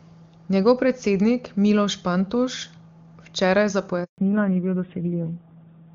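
At 4.04 s the call undergoes a network handover, and no speech frames arrive while the link switches, so the speech cuts out abruptly and leaves a handover gap of 140 ms of silence, lasting until 4.18 s. Whatever was spoken in that window is simply gone rather than masked or smeared, and the talker comes back once the new link starts. From 4.18 s to the end, the call falls back to narrowband, dropping from the AMR-WB HD Voice codec at 23.85 kbit/s to AMR-NB at 7.4 kbit/s. Nothing above 4 kHz survives, so sibilants and consonant detail lose their edge and the voice turns muffled and duller, with the rougher, buzzier texture of a low-rate narrowband coder. Before the switch the wideband path is audible in the brighter, fuller speech, with faint or no codec damage at that rate.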